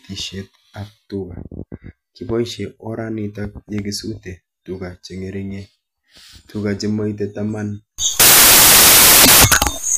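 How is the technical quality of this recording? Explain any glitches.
The recording has one serious glitch. From 7.98 s to the end at 9.97 s, samples built from the wrong bytes turn the speech into loud, harsh broadband noise, close to white on the louder sounds. The reader misassembles each sample's bytes, so the rapidly changing low bits become the loudest part.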